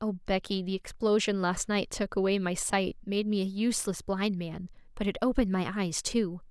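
No technical faults can be heard anywhere in the recording.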